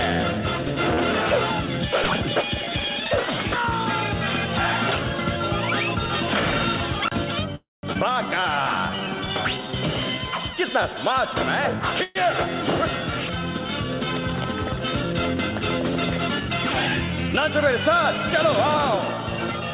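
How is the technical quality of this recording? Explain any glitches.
The recording has several timing glitches from network delivery: two freezes, a forward skip, a stretch of slowed playback and a stretch of sped-up playback. Nothing above 4 kHz is present, which points to a narrowband call codec of the G.711 type.

Call audio freeze, 7.55 to 7.85 s and 12.03 to 12.17 s: in the first event the sound stops progressing and the last fragment is extended as a fading buzz for about 0.1 s, then falls silent for about 180 ms, 278 ms in all. The second event lasts 119 ms and stays a fading fill throughout, with no silence. In both events the audio resumes where it stopped, so nothing is lost and only a gap is inserted. The likely cause is delayed packets draining the jitter buffer, with the receiver concealing the shortfall.

Skip ahead, 7.93 to 7.97 s: shortly after the first freeze, playback jumps forward. 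Roughly a fifth of a second of audio is missing, and the two sides are joined by only a 19 ms bridge, so the cut sounds abrupt rather than like a pause. This happens when later audio is already queued and a stretch is discarded. Here that trims back much of the delay the freeze added.

Jitter buffer slow-down, 8.03 to 10.20 s: the audio plays at about 93% speed with unchanged pitch, and sounds are drawn out by a total of 165 ms. The receiver repeats single pitch periods or short pause fragments many times in a row to rebuild its reserve after the preceding disruption. The result is a slightly sluggish, stretched quality across these two seconds.

Jitter buffer speed-up, 15.51 to 16.48 s: the audio runs at about 105% speed, still at the same pitch, and sounds slightly hurried. The receiver had more audio buffered than it targets. It cut short pieces of one or a few pitch periods in succession, removing roughly 70 ms in total to bring the delay back down.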